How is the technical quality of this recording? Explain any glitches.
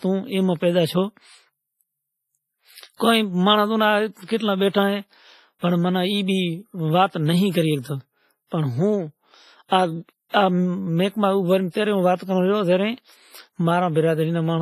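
The recording is limited by heavy lossy-codec damage across the whole speech clip. From start to finish, the sound is ringing and washy, with a hiss that rises and falls with the signal, and nothing above 15.5 kHz. This is likely WMA compression at a low rate, which fits WMA version 1 at about 24 kbps. The transform coder's long blocks smear quantisation noise over tens of milliseconds around each sound, and at this rate weak spectral components are zeroed out.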